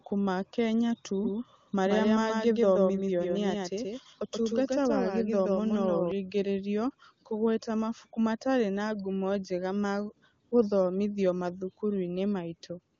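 A speech recording carrying a doubled audio track from 1.24 to 6.12 s. A second full-band copy trails the original by about 150 ms, roughly 5 dB quieter, with no room colour. It starts and stops abruptly, likely from a slower second capture path mixed back in. AMR comfort noise also appears, from 10.49 to 10.51 s and from 12.95 s to the end. The phone stopped sending speech frames there, and the receiver filled the gaps with smooth synthetic noise that switches in abruptly. The AMR wideband (HD Voice) coding itself sounds clean, which fits a high bitrate.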